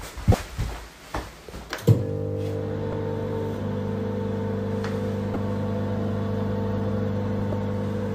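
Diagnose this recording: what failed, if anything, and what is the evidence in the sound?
The failure is damaged data in a compressed stream, at the codec stage: the encoded file or stream had bytes lost, zeroed or overwritten before decoding. Short glitches break into the sound at 0.31 to 0.34 s, at 2.92 s, at 5.33 to 5.36 s and at 7.52 s, each lasting 10 to 30 ms. At each point the decoder met corrupt frames, misread or discarded them and lost sync while hunting for the next valid frame header, producing a brief glitch.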